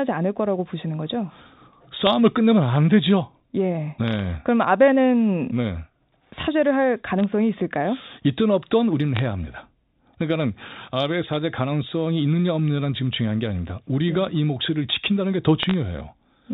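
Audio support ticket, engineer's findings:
Bit errors on the digital phone line at 2.07 s, 4.08–4.19 s, 7.20–7.24 s, 9.15–9.19 s, 11.34–11.36 s and 15.63–15.74 s: short bursts of sharp ticks and crackle over the speech. Flipped bits in G.711 mu-law samples, rate a few tenths of a percent; sign or high-bit hits jump single samples.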